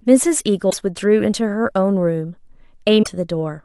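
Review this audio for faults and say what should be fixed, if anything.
At 0.69 s and 3.02 s the speech jumps ahead, leaving a garbled blip about two 26 ms frames long. That's likely a broken MP3 bit reservoir: frames went missing, so the next ones read borrowed bits from the wrong data. Edit MP3s only with reservoir-aware tools, or re-encode from source.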